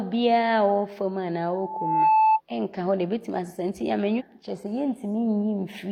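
Loudspeaker feedback squeal runs from 1.46 to 2.41 s. The microphone is picking up the loudspeaker it drives, and around 876 Hz the loop gain rises above one, so that frequency feeds on itself. It swells over about half a second into a steady, piercing tone that ends up about 5 dB louder than the speech beneath it. It stops at 2.41 s.

A stream segment skipped between 4.16 and 4.22 s. The speech jumps forward abruptly, with a brief discontinuity and a small blip at the join, as though a piece of the programme has gone missing. The likely cause is that one segment of the segmented stream failed to arrive or load in time, and the player went straight on to the next segment.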